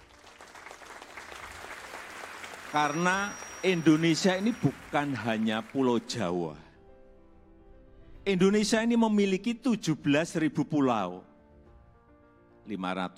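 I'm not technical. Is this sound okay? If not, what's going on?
No. From 2.64 to 4.77 s, a quiet, high whistle near 5.7 kHz sits behind the sound. This is a feedback whistle, likely a loudspeaker feeding into the microphone.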